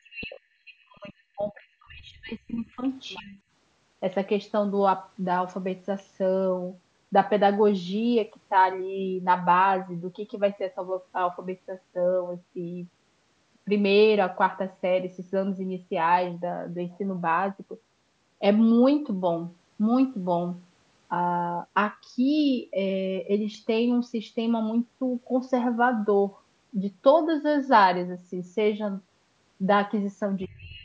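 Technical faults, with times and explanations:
0.03 to 2.83 s, 3.16 to 3.38 s and 30.48 to 30.85 s, speech suppressed in double talk: The speech sinks sharply and breaks up in pieces, for about two seconds of the opening stretch, then briefly near 3.2 s and again in the closing moments, falling by around 40 dB at its deepest at the start and around 30 dB later. This is likely an echo canceller that heard both ends talking together, could not tell this talker from the loudspeaker echo, and ducked everything.
2.82 to 2.89 s, 3.09 to 3.33 s, 30.42 to 30.46 s and 30.75 to 30.83 s, other side's voice leaking through: Faint scraps of a second voice surface beside the main speech, most audible near 3.1 to 3.3 s, where they sit about 25 dB below it, and elsewhere lower, around 30 to 35 dB down. These are likely remnants of the far end playing from the loudspeaker that the echo canceller failed to subtract from the microphone signal.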